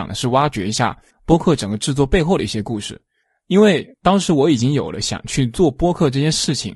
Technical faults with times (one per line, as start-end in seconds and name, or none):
0.00-6.75 low-delay AAC compression